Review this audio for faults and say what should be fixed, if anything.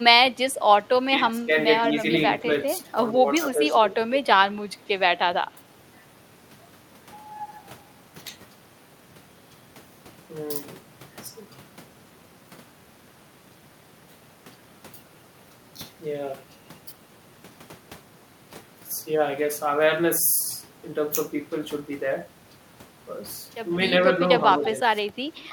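Speech suppressed in double talk at 0.36–0.6, 1.16–1.52, 2.41–3.92, 5.55–5.61 and 24.57–25.21 s: the speech dips by roughly 10 to 20 dB, likely because an echo canceller ducked both talkers during overlap. Better double-talk detection would prevent it.

Echo leak at 2.81–2.85, 24.63–24.67 and 25.37–25.42 s: faint to moderate delayed copies arrive 145 to 157 ms late, likely loudspeaker pickup the canceller missed. Unlike reverb, each copy is a separate repeat at a fixed delay. A better-converged canceller or a headset would prevent it.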